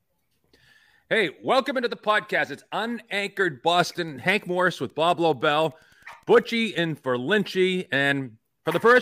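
Between 3.76 and 6.93 s, the circuit rectifies a nearby Wi-Fi beacon every 102.4 ms; this Wi-Fi interference is faint, steady ticking under the speech.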